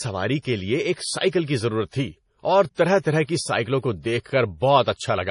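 From start to end, the treble stops sharply at about 10.6 kHz, so nothing sounds above it. Sibilants are dulled. The whole sound has a watery, swirling texture, and faint detail flickers in and out. Consonant onsets blur. The damage is heavy. This is likely MP3 compression at a low bitrate, which fits about 32 kbps. Short of bits, the encoder drops the top band and discards quiet frequency detail from frame to frame.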